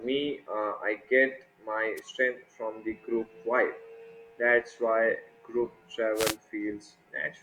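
At 1.96 to 2.00 s, after "get my", and again at 6.14 to 6.37 s, after "why group", the speech suffers a wireless microphone noise hit: the FM radio link fades as reflections cancel, so receiver noise swells into a brief swish of static over the voice.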